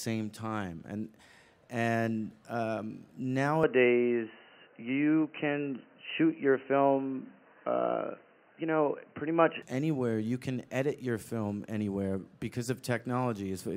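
From 3.6 s to 9.6 s the recording's input likely switched to a poorer device, such as another microphone or a headset in call mode, and then switched back. There is no gap at either switch; the sound simply changes. During that stretch nothing above 3 kHz gets through, so the audio turns dull and boxy. A modest level shift and a faint new background hiss come with it. Full bandwidth returns abruptly at 9.6 s.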